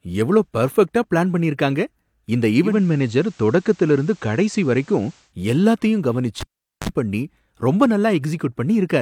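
From 2.62 s to 5.34 s the receiver is blending from digital radio to analogue FM, cross-fading over about 200 ms. Hiss sits roughly 35 dB down, and level shifts about 1 dB. Unlike a codec dropout, the sound continues, just noisier.

At 6.41 s a cable is pulled and plugged back in. A pop opens about 434 ms of near silence, then a 46 ms burst of 50 Hz mains buzz as the plug touches, and a second pop at 6.89 s. That buzz rules out a simple digital gap.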